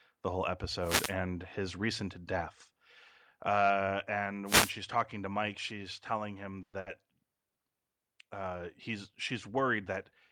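A wireless microphone noise hit occurs twice: as the analogue FM signal fades, receiver noise surges, giving a short swish of static from 0.81 to 1.15 s, between "the whole" and "his recent death", and again from 4.45 to 4.73 s, just before "talking to". At 6.62 to 6.74 s, packets likely stalled and the jitter buffer ran dry, causing a call audio freeze: the last sound is stretched for about 110 ms, then the audio picks up where it stopped with nothing lost. At 6.80 to 7.02 s, just after "she's telling him", a burst of packet loss means the receiver fills about 60 ms with a fading continuation of the last sound, then jumps ahead past roughly 60 ms of missing audio.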